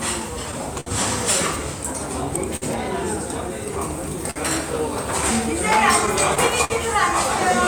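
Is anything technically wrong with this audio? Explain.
Yes. There are three kinds of fault in this audio.

Clock drift between sender and receiver runs throughout. The sender's clock runs roughly 3 percent slow. The receiver's buffer keeps draining, causing uneven small timing hiccups.

A short stall from a late packet occurs at 0.80–0.88 s, 2.56–2.64 s and 4.31–4.38 s. Each time, the last sound is held about 50 to 60 ms, with a slight buzz or dip.

Repeated stalls (stutter) run from 5.78 to 6.72 s. The buffer empties four times, longest 54 ms. The receiver repeatedly continues the last sound, so the audio drags and stutters.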